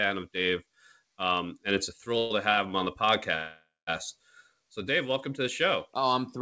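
At 2.18 to 2.32 s there is a call audio freeze, likely caused by packets held up in transit so that the jitter buffer ran dry. The receiver fills about 120 ms by carrying the last sound forward as a fading buzz, then resumes exactly where it left off. Nothing is lost, but the speech now runs that much later.

At 2.52 to 2.59 s a short stall from a late packet follows. One packet missed its playout time, so the receiver stretched the sound for about 50 ms until it arrived. The result is a syllable held slightly too long, with a faint buzzy dip, and another small step of added delay.

At 3.36 to 3.89 s a longer call audio freeze occurs, likely from a bigger hold-up in delivery. About 510 ms is concealed: the held sound buzzes, fades, and then drops to roughly 200 ms of silence before the speech picks up from the same point. All of it rides on a G.722 call path whose band stops at 8 kHz.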